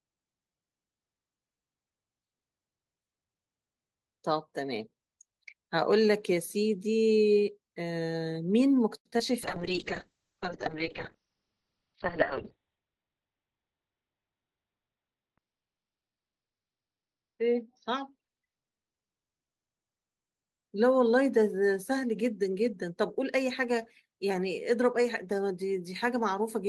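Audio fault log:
8.96–9.06 s, short stall from a late packet: the jitter buffer ran dry and the sound was stretched for about 89 ms until the packet arrived, adding 89 ms delay.
9.10–9.13 s and 9.18–9.20 s, short concealed packet loss: brief gaps were filled by extending the preceding sound, leaving quick smears where roughly 10 and 20 ms went missing.
9.43–20.71 s, call bitrate drop: the encoder fell from 32 to 8 kbps, bottoming out for about 5.5 s, with bandwidth narrowing from 20 kHz to 4 kHz, so the speech turns muffled and coarse.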